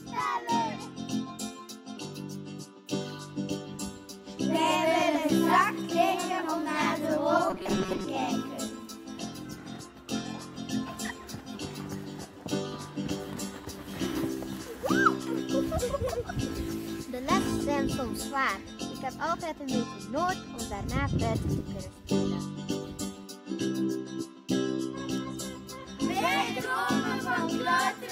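From 7.50 to 8.05 s the sound turns into robotic sound from repeated short buffers: a rigid, metallic buzz fixed at 188 Hz. That pitch matches a chunk about 5.3 ms long. New audio was likely arriving too slowly, so the same tiny slice was looped for most of that stretch and the real audio skipped. Unlike dropouts or clicks, there is no silence or sharp break, only a steady mechanical tone.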